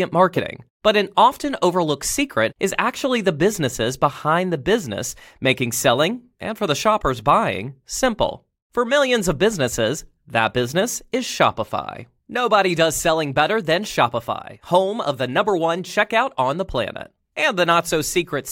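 Nothing technically wrong can be heard anywhere in the audio.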